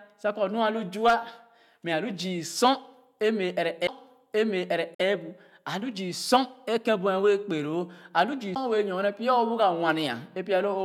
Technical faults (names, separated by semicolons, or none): CD skip; Bluetooth dropout